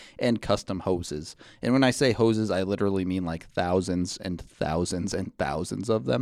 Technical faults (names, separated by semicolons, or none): none